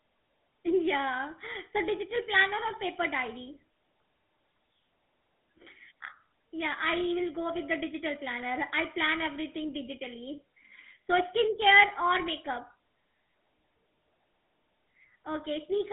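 From the first second to the end, the speech carries the sound of the GSM full-rate codec. The audio is confined to a telephone line band of roughly 200 Hz to 3.7 kHz, with nothing above 3.8 kHz. Its buzzy, gravelly roughness, which fits a 13 kbps rate, comes from coarsely coded pulse excitation driving a vocal-tract model. On a spectrogram the energy stops at a hard ceiling near 3.8 kHz, with the harmonics smeared and grainy below it.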